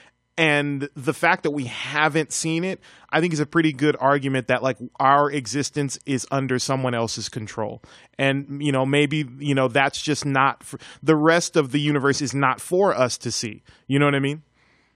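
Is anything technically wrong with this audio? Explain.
No, nothing in this speech recording stands out as a technical fault. No event anywhere in it calls for a closer look.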